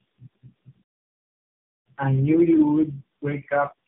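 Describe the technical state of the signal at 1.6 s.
At 1.6 s you're in the middle of a playback stall running from 0.83 to 1.86 s. The output just goes dead for about a second, most likely because the player ran dry or got blocked, and then carries on with "I knew you'd wake".

Around that silence, the speech has the character of tandem speech coding: rough, muffled and warbly. That fits four speech coders in a row, ending in AMR-NB, each one re-coding the previous codec's already degraded output.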